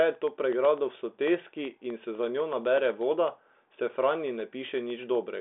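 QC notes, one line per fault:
0.15 to 5.28 s, periodic USB or driver dropouts: tiny half-millisecond gaps of silence every 0.125 s tick steadily through the speech, like a stalled driver.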